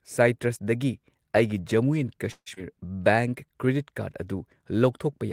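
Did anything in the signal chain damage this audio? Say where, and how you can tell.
Yes, the damage is at the network and jitter-buffer stage. At 2.31 s there's a call audio freeze lasting to 2.48 s: the last bit of speech carries on as a fading buzz for about 0.15 s, with roughly 50 ms of silence, then resumes exactly where it stopped. Packets were likely held up in transit.

Right after, at 2.54 to 2.58 s, there's a skip ahead. Around a tenth of a second of speech is simply gone, and the two sides are butted together with only about 20 ms of fill. That's audio dropped in transit or discarded by an overflowing jitter buffer while later audio was already waiting.

From 2.77 to 3.66 s there's a jitter buffer slow-down: the speech runs at 91% speed but keeps its pitch, so sounds feel stretched. The receiver repeated single pitch periods to add about 91 ms and rebuild its reserve.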